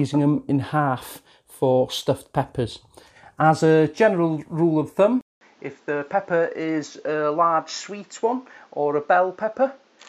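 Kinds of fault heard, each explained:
Input switched to a poorer device: at 5.21 s there's a silent gap of 200 ms. The sound then comes back duller and a little quieter, with nothing above 7.6 kHz and faint new background noise underneath, likely because a different microphone took over.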